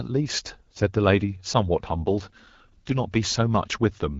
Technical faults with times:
1.90-2.93 AMR rate drop

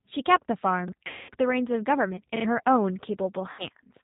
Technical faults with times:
0.00-4.03 G.729 codec
0.88-0.92 repeated buffer
1.07-1.32 VoIP packet loss concealed by the speech codec
3.51-3.66 VoIP packet loss concealed by the speech codec

